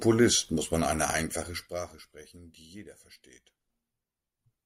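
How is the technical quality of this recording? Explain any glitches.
Nothing in the recording stood out as a technical problem on listening, so there are no glitches to explain.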